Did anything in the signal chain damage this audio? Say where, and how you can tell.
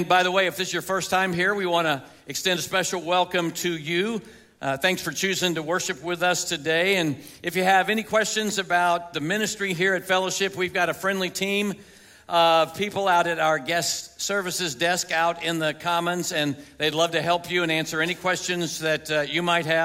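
Nothing in the signal chain damaged this audio that I can hear.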